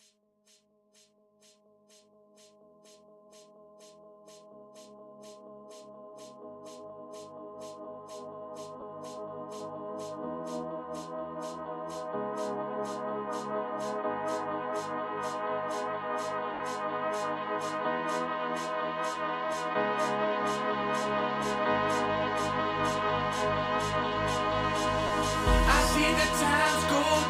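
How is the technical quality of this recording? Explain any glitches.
The recording has three short dropouts from lost LE Audio frames. The first is a brief blip at 8.81 s. The second runs from 16.54 to 16.60 s, the longest at about 60 ms. The third spans 25.07 to 25.10 s. Missing frames force the LC3 decoder to conceal the gap. It repeats the last spectrum with randomised signs. So tonal sound turns into a grainy, noisy smear. The 60 ms gap fades as concealment winds down.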